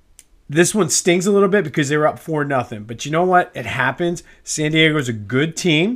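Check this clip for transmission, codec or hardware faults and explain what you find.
No faults turn up on listening: the speech signal stays continuous and stable across the whole recording.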